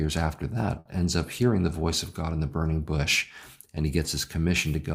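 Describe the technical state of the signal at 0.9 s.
At 0.9 s the speech is just resuming after a short held, fading smear from 0.79 to 0.89 s, right before "ends up hearing the". It is a burst of packet loss: about 60 ms was concealed by extending and decaying the last sound, and about 40 ms is simply missing.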